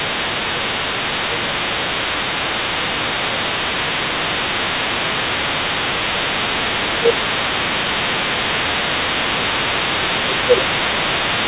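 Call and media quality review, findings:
Other side's voice leaking through, entire clip, 0 to 11.47 s. A second voice sits only a few dB under the talker. Likely cause: loudspeaker playback reaching the mic, not fully removed by the echo canceller. Band-limited to 4 kHz, matching the narrowband G.711 call path.

Speech suppressed in double talk at 0.06–0.67, 1.29–2.12, 2.79–5.52, 6.0–7.51 and 10.0–11.02 s. Talker level dips by around 5 dB, nearer 10 dB in the third and fourth stretches. Likely cause: echo canceller ducking both sides during overlap.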